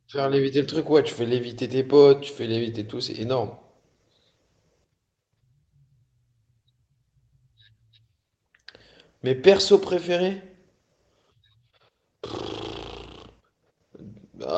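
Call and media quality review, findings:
No call or media quality findings for the speech.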